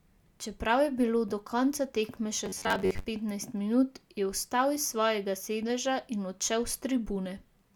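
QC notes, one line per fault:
2.46–3.05 s, robotic sound from repeated short buffers: rigid metallic buzz near 94 Hz after "do konca tekme še", likely an 11 ms buffer looped over skipped audio.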